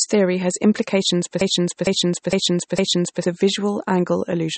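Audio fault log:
throughout: MP3 compression, likely the cause of a plainly audible watery, swirling quality, as weak frequency lines drop in and out between frames, consistent with a low bitrate around 32 kbps. A spectrogram shows flickering holes and nothing above 8.4 kHz.
1.41–3.24 s: broken-record loop. Just after "theory has implications for", a 457 ms fragment repeats exactly four times back to back, likely because the stream stalled and resent its last piece, so the intervening audio is lost. Waveform and spectrogram show identical repeating blocks.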